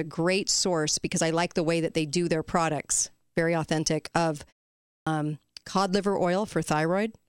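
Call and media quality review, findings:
Clipped start after a pause, 4.9–5.07 s: after a 0.46 s gap following "authentic of", about 165 ms is swallowed before "cod liver". Output device likely sleeps in silence and wakes late. Waveform and spectrogram show the onset starting abruptly, without its opening energy.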